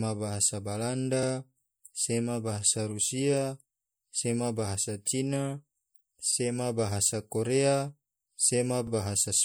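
MP3 compression runs through the whole speech clip: the top end is cut off and weak detail flickers from frame to frame, giving a watery, swirly texture with smeared attacks. This damage is plainly audible and likely comes from MP3 encoding at a low bitrate, which fits about 64 kbps. Overlapping chunks cause stutters at 1.23 to 1.28 s, 6.33 to 6.37 s (just before "bahasa korea") and 8.87 to 8.92 s. At each join about 48 ms of sound plays twice, because each new chunk begins before the previous one ended. The joins fall at a steady spacing that matches 2.5 s chunks. Pre-echo appears at 5.05 s, right after "bahasa rusia sema bahasa". A hiss of about 10 ms leads into a sharp attack. The codec spread quantisation noise across its block, so noise sized for the loud onset leaks into the quiet moment before it and softens the attack.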